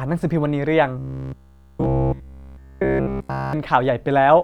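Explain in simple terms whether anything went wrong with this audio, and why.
From 0.99 to 3.53 seconds the speech turns into a rigid, metallic buzz at about 67 Hz. This is robotic sound from repeated short buffers. The likely cause is the software looping the same 15 ms of audio throughout, because new audio arrived too slowly.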